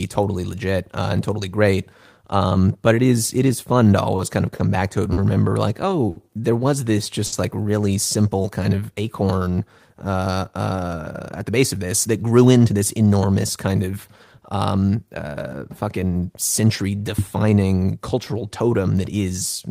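Speech with four packet-delivery faults from the receive path. Between 4.16 and 6.18 s, leading up to "there was this", there are scattered short gaps: about four lost or late packets, each patched by extending the preceding sound. Around 150 ms in total is filled this way, the longest patch roughly 70 ms, covering some 7% of that stretch. The speech stays intelligible but picks up brief ticks and smeared syllable edges, and the span ends about 10 ms longer than it should. From 7.26 to 7.34 s, right after "there was this" and before "like really", comes a short stall from a late packet. The jitter buffer ran dry, so the receiver held the last sound for 60 ms until the packet turned up, then continued from the same point. Nothing is lost, but one sound is audibly sustained too long, and the playout delay is 60 ms greater from then on. From 8.37 to 8.95 s, between "like really" and "acorn uh", a jitter buffer slow-down plays the speech at 94% of normal rate while keeping pitch unchanged. 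Repeated pitch periods add 43 ms so the buffer can rebuild its reserve, which drags out the syllables. From 11.02 to 13.07 s the opposite happens: a jitter buffer speed-up removes roughly 150 ms of short pitch-period segments to trim excess buffered delay. The speech runs at 108% with pitch preserved and sounds noticeably hurried across those two seconds.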